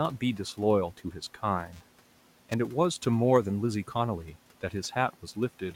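Speech with faint room noise about 23 dB below it. From 1.73 to 2.54 s there is buffer tearing, a robotic buzz at 375 Hz. Each period splices in a small slice of audio a few milliseconds old, which fits a 128-sample buffer.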